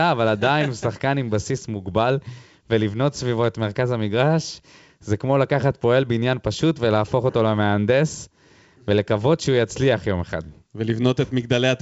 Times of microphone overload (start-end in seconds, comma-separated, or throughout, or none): none